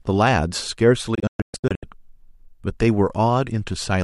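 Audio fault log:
1.15–1.83 s, digital broadcast dropout: The speech breaks into several short silent holes. Together they remove about 432 ms of audio across roughly 670 ms, and the longest gap is 120 ms. Each cut fades out in about 3 ms, so it sounds abrupt but not clicky. The receiver muted whenever frames were lost or failed their check, and the pattern fits around 18 missing frames. Nothing sent during the holes can be recovered.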